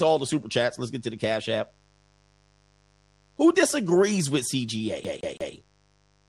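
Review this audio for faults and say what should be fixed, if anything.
A mains buzz runs through the whole speech recording: a steady, raspy 50 Hz hum sitting faintly, around 40 dB below the voice. Sharp switching spikes twice per mains cycle produce a ladder of harmonics. On a spectrogram these appear as evenly spaced horizontal lines at 50 Hz multiples, reaching into the kilohertz range. Use shielded cabling and keep dimmers and rectifier supplies away from the recording chain.

The voice sounds dull, with a gurgling, granular edge throughout. The likely cause is MP2 compression at a low rate near 80 kbps. Starved of bits, the codec switches off upper sub-bands and coarsely quantises the rest. On a spectrogram the high frequencies look patchy, with blocks flickering in and out. Encode at a higher bitrate or keep an uncompressed master.

From 5.04 to 5.54 s a CD stuck on one turn produces a fast, even stutter. 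The same 165 ms of audio repeats three times, with a tiny mute at each jump back. The waveform shows identical repeating segments separated by brief gaps. Clean or replace the scratched disc, or re-rip it with error-correcting software.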